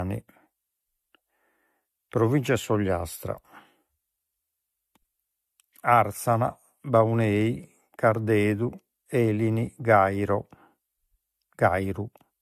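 From start to end the speech sounds swirly and hollow, with blurred attacks and nothing above 14.2 kHz: likely generation loss from roughly three passes through a 64 kbit/s AAC-LC-type codec.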